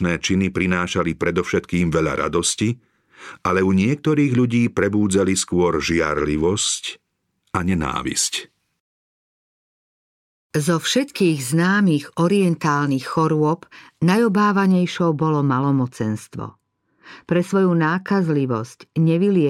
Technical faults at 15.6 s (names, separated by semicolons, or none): de-emphasis applied wrongly